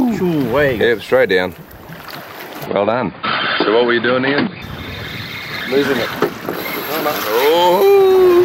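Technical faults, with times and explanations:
2.66 to 4.62 s, input switched to a poorer device: The sound suddenly turns dull and boxy. Nothing above 4.8 kHz gets through. A faint new background noise appears, well below the signal. The level stays about the same, and there is no gap at either switch. At 4.62 s the full band returns. The likely cause is a change to a narrower-band input, such as another microphone or a headset's call profile, which carries its own tone and noise.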